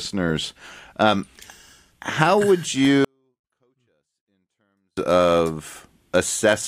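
From 3.05 s to 4.97 s, just after "how would", the speech shows a 24-bit alignment error (too quiet). Samples held as 24-bit integers in the low bytes of each 32-bit word are being read as full 32-bit integers, so every value lands about 48 dB lower than intended. The audio stays clean but falls almost to inaudibility for those two seconds, then returns abruptly to its proper level.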